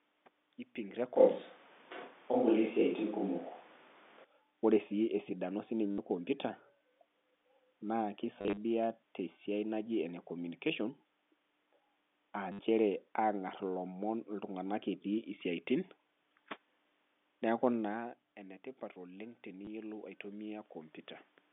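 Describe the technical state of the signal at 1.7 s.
The voice sounds roomy and hollow, with thinner bass, from 1.16 to 4.24 s, likely a switch to a distant microphone after the close microphone dropped out.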